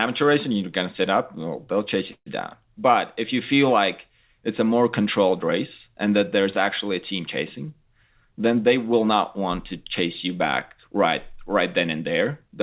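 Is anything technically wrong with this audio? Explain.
Yes, there are two faults in this speech clip, which has passed through a telephone-style call path with nothing above 4 kHz.

At 2.12 s, right after "up well they'll chase", a call audio freeze holds the sound for about 0.15 s before "you down" resumes. The likely cause is packets held up in transit, which let the jitter buffer run dry. The receiver stretched the last sound into a brief fading buzz and then about 80 ms of silence. Nothing is lost, but the rest of the clip lands about 143 ms later. On a waveform this shows as a short decaying tail and then a flat gap. On a spectrogram it appears as smeared, featureless energy followed by a blank vertical strip.

From 7.94 to 10.04 s, between "actually a team chasing" and "you back right", a jitter buffer speed-up makes the speech run about 7% fast at unchanged pitch. To shed excess buffered delay, the receiver cut out single or small groups of pitch periods again and again, removing roughly 150 ms in total. 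The phrase sounds slightly rushed. On a spectrogram the harmonics stay level while the syllables are compressed in time, and the waveform shows the pitch cycles keeping their spacing while whole cycles are dropped across that stretch.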